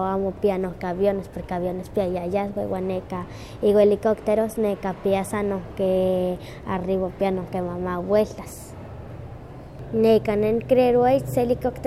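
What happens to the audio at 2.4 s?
Nothing goes wrong at 2.4 s; the speech carries straight through that moment without a dropout, click or any other audible fault.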